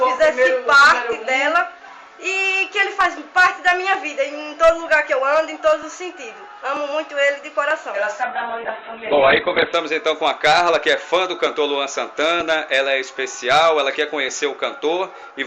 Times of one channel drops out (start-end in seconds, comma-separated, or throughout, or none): none